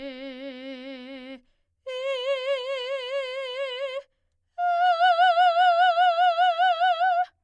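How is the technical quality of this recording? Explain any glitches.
Nothing goes wrong anywhere in this bit of music, so there's no glitch to explain.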